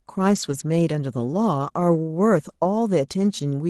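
From 0.35 to 0.53 s, a short stretch turns rough and grainy, with no gap. This is a lost packet rebuilt from error correction. Several packets went missing, and the decoder filled in about 100 ms from the lower-quality copies carried in the packets that followed, likely over a 24 kbps Opus call path.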